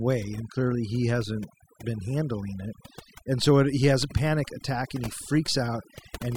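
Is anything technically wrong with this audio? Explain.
Yes. Throughout the speech there is overdone noise removal: a noise reducer set too aggressively pulls individual frequency bands down whenever they sit near its noise estimate, taking quiet speech detail with them. Pauses drop to near silence dotted with twinkling specks. Plain low-pass dullness would lack those specks.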